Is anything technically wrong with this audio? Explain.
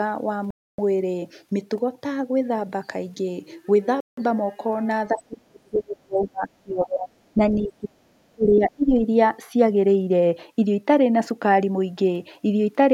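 Yes. Bluetooth stalls at 0.51 to 0.79 s and 4.00 to 4.17 s: the sound cuts to silence for about 0.28 s and then 0.17 s before resuming. The likely cause is interference delaying packets until the headphone buffer ran empty and playback waited.

Speech suppressed in double talk at 5.12 to 7.09 s, 7.34 to 7.40 s, 7.65 to 8.05 s and 8.31 to 8.91 s: the speech sinks, by as much as roughly 40 dB at its deepest, in the longest stretch for about two seconds. This is likely an echo canceller that couldn't separate the talker from loudspeaker echo while both sides spoke, so it turned everything down.

The other side's voice leaking through at 5.74 to 5.78 s and 7.63 to 7.68 s: brief, faint scraps of a second voice, far below the main speech. The likely cause is loudspeaker playback reaching the microphone that the echo canceller didn't fully remove.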